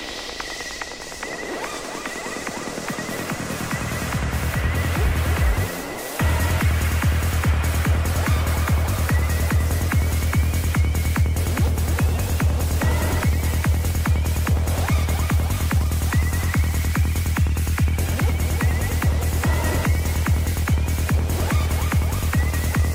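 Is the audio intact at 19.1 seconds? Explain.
Yes, at 19.1 seconds the audio is intact, with no dropout, click, distortion or other fault to be heard at that moment.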